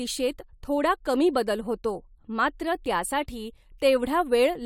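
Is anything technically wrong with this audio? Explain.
No, nothing is technically wrong with this audio.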